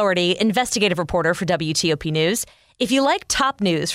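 Nothing goes wrong in this short bit of speech; there's no glitch, dropout or disturbance anywhere along the way.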